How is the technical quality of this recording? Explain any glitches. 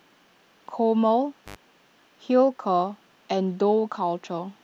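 There is one glitch in this speech recording. An intermittent contact, a loose cable or plug, opens for about 88 ms between 1.45 and 1.56 s, cutting the sound out with crackle at each edge and faint hiss during the gap.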